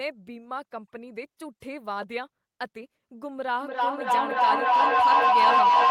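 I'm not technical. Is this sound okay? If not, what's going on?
No. From about 3.61 seconds to the end, the speech is overtaken by feedback howl. Two devices in the same room are likely on the call together, so the sound from one loudspeaker is picked up by the other microphone and sent back round, getting louder each trip. It narrows into a whistle near 1 kHz, the loop coming round roughly every third of a second, and climbs well above the speech before the clip ends.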